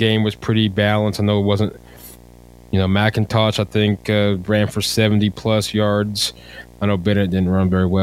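A steady buzz with hash riding above it runs under this speech recording throughout, about 25 dB below the signal. This is video or display buzz, a screen or video cable coupling into the audio path at its 60 Hz field rate.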